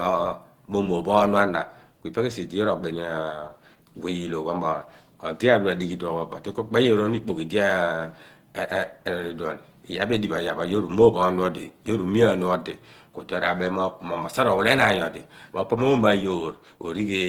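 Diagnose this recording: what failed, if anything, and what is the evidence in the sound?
Codec stage: Opus compression throughout. The speech is hoarse and grainy, though content reaches 20.2 kHz. Likely a hybrid-mode encode near 16 kbps.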